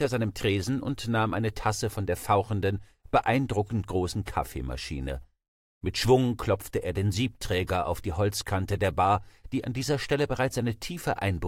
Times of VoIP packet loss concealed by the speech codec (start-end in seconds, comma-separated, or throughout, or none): none